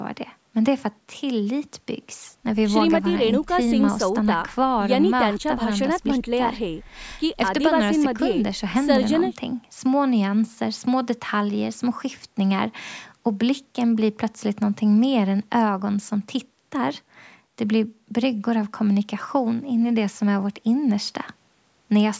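No technical faults can be heard anywhere in this speech. It has clearly passed through a call's microphone processing, which trims away the lowest bass and leaves nothing above 8 kHz.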